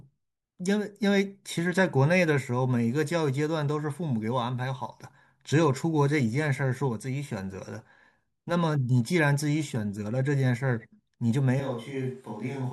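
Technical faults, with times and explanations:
11.60 s to end: switch to a distant microphone. Speech abruptly turns roomy and thin, about 5 dB quieter with more room noise, likely after the close microphone dropped out.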